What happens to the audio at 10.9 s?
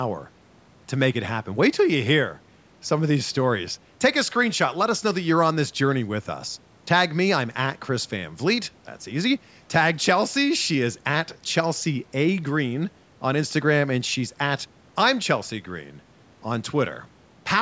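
Nothing goes wrong at 10.9 s: the speech there is intact, carried through the call's microphone processing, which trims the lowest bass and leaves nothing above 8 kHz, as that processing is meant to.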